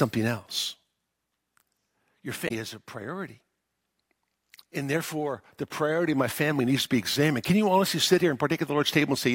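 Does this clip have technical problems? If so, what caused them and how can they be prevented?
Yes: around 2.44 to 2.51 s there's a short glitch from damaged data in the compressed stream, where the decoder lost sync. Verifying file integrity and using error-checked transfer would prevent it.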